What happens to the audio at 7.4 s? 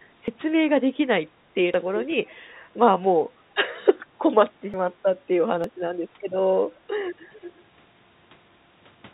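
A faint, delayed copy of the speech comes back between 7.32 and 7.51 s, trailing the original by about 339 ms and sitting roughly 20 dB below it, heard as a brief ghost under the band-limited call audio, which stops at 4 kHz. This is an echo leak, likely from a far end playing the call on a loudspeaker, where the echo canceller failed to strip all of the microphone's pickup and sent the remainder back.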